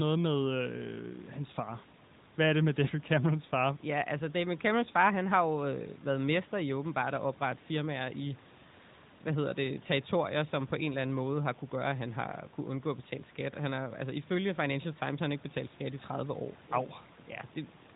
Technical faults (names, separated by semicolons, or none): none